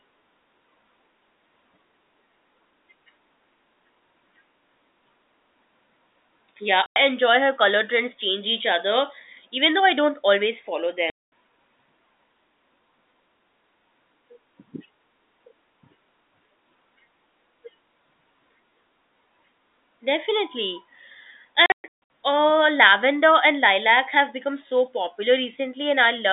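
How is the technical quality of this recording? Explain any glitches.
The sound is telephone-band G.711 audio with three dropouts. Packet loss filled with silence occurs at 6.86–6.96, 11.10–11.28 and 21.66–21.92 s. Lost packets, consistent with 20 ms each, were replaced by silence, so the sound cuts out with hard edges. The waveform shows flat-line gaps and the spectrogram shows blank vertical strips.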